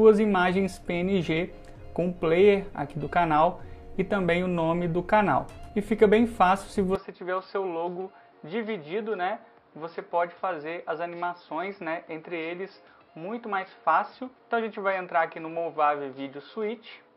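At 6.95 s the sound abruptly turns duller and somewhat boxier, with no gap at the change, and stays that way to the end. Above 5.4 kHz the band is empty, the level drops by a few decibels, and a faint new noise floor sits well beneath the signal. The likely cause is the input switched to a poorer device: capture moved mid-recording to a narrower-band microphone with its own tone, gain and background noise.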